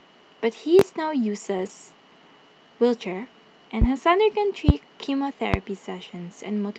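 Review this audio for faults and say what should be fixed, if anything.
Loud pops at 0.79–0.83, 3.82–3.85, 4.69–4.72 and 5.54–5.57 s, each a single sharp pulse about 20 dB above the speech, likely from a voltage step such as a switch, static or driver glitch.

At 1.57–1.71 s and 4.31–4.33 s, lost packets were rebuilt from error correction. The 80 ms and 20 ms stretches are rougher and noisier because low-bitrate redundant copies replaced the missing audio. The first stretch fits four separate 20 ms packets.

Prevention: secure cabling, grounding and device drivers, and reduce network packet loss so forward error correction is rarely needed.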